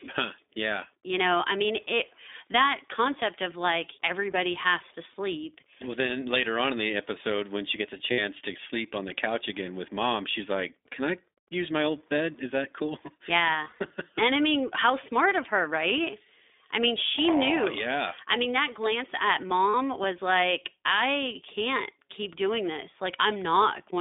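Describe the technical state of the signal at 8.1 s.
Packets carrying about 60 ms of audio were lost from 8.12 to 8.20 s, consistent with three dropped 20 ms frames. The lost iLBC frames were concealed by the decoder repeating the last pitch cycle mixed with noise, so the gap sounds like a briefly held, slightly buzzy vowel before the speech snaps back.

The whole clip passes through the iLBC codec at 15.2 kbps with 20 ms frames and a 300 Hz to 3.7 kHz band. Each frame's excitation is coded independently and nothing above 4 kHz survives, so the speech at this point sounds plainly rough, synthetic and muffled.

Wi-Fi interference runs from the start to 16.81 s. A nearby radio's beacon, every 102.4 ms, is rectified by the audio circuit, which puts a very faint ticking about ten times a second underneath the speech.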